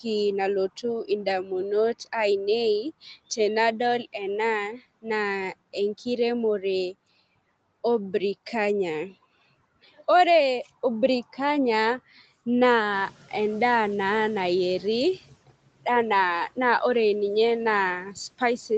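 Noise suppressor catching up, 12.92 to 15.26 s: room noise jumps by about 12 dB and passes through with less reduction at first, then sinks by about 12 dB over 2.3 s as the estimate adapts.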